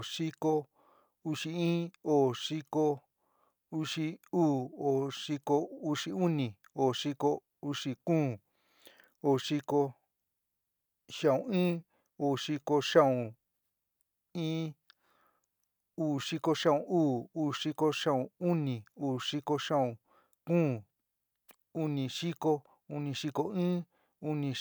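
Speech recording, with no technical faults to be heard.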